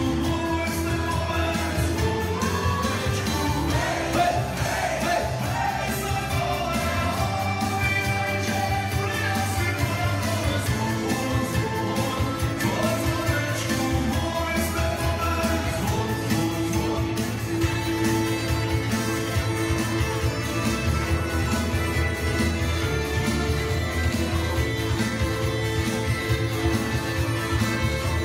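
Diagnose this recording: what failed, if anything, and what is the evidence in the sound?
Nothing here points to a failure at any stage of the chain, so there's no fault to diagnose in this recording.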